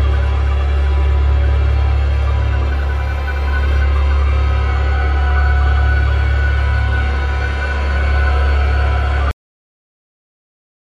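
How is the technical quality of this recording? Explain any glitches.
The recording has one clear fault: a cut-off end. At 9.31 s the sound stops abruptly, mid-sound, and the remaining 1.5 s is digital silence. The final buffers were never written or played back, so nothing of the tail made it into the file. What separates this from a natural ending or a fade-out is the complete absence of decay: there is no ring-out, reverb tail or gradual drop in level, just an instant fall to zero.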